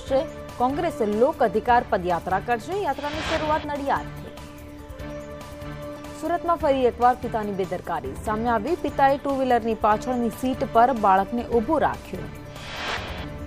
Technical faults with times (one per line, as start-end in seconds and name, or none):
0.00-13.46 computer activity noise